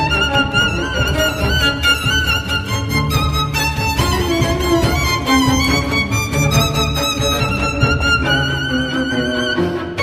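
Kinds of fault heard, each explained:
Pre-emphasis left on: from about 1.08 s to 7.40 s the treble boost applied before recording or transmission is never undone, so high frequencies stand out by about 11 dB at 10 kHz relative to 1 kHz, a tilt that fits a 50 µs FM curve. The sound turns thin, bright and hissy. On a spectrogram the upper band glows noticeably stronger across that stretch, and the waveform shows sharper, spikier high-frequency detail.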